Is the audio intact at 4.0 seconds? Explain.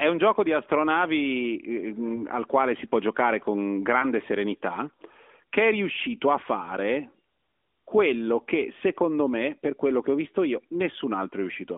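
No. Around 3.99 to 4.06 s the speech gives a brief dip or warble, then recovers. This is a lost AMR speech frame, consistent with a single 20 ms frame failing its checksum. The decoder reused the previous pitch and vocal tract settings at reduced gain.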